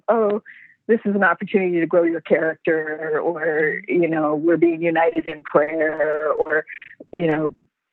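Audio carried over a call link with about 8 kHz bandwidth. From 5.09 to 7.75 s, repeated packet loss gives a choppy, robotic sound. Many short holes, up to 60 ms, are patched by stretching the preceding sound, covering roughly a third of that stretch.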